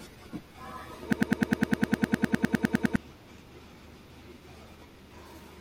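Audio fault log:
1.13–2.96 s, broken-record loop: one 102 ms fragment of speech repeats exactly, back to back, 18 times, and the speech due there is lost, likely from a stalled stream resending its last fragment. Identical, gapless, undecaying repeats distinguish it from echo or stutter.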